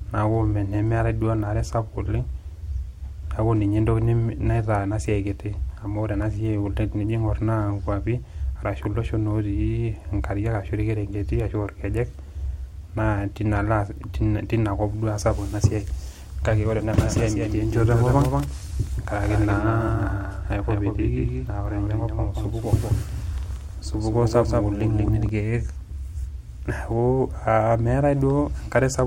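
From 17.03 s, just after "ore ena", a doubled audio track runs until 25.29 s. A full-band copy trails by roughly a fifth of a second, a little quieter. It cuts in and out abruptly. A slower second capture path is the likely cause.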